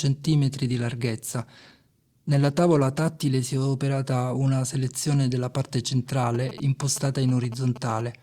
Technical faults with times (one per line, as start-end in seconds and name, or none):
1.25-4.65 call bitrate drop
6.35-8.22 GSM signalling bursts